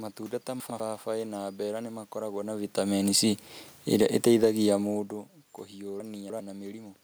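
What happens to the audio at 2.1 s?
Nothing goes wrong at 2.1 s: the speech carries through intact, with only the room's own background noise beneath it.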